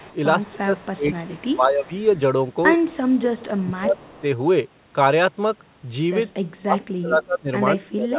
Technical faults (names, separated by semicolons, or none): speech suppressed in double talk; echo leak